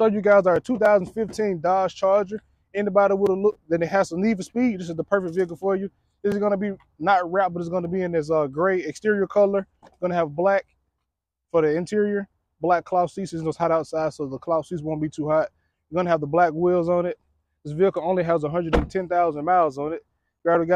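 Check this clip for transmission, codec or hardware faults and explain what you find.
Two brief faults are present, both the same kind. At 2.77 s and 7.85 s, a likely case of dropped samples: a handful of samples went missing, so the waveform jumps abruptly, producing a single sharp click each time.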